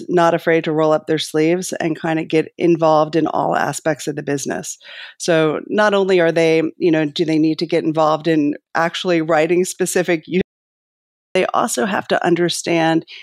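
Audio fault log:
10.41–11.35 s, audio dropout to silence: input likely lost while recording continued, so 0.94 s of speech vanishes into complete silence with no room tone.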